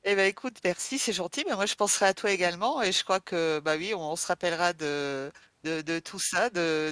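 Nothing in the speech signal departs from normal, with no dropouts, distortion, level jumps or timing disturbances anywhere in the recording.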